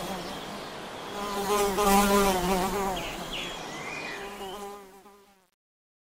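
From 4.08 s to the end at 6.16 s, the fade-out shows truncation distortion: the level was reduced without dither at a word length that fits about 9 bits. From 4.29 s the waveform collapses into coarse steps, sounding gritty.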